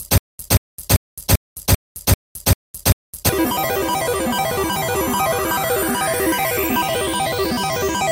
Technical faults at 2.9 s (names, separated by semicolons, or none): stutter with silent gaps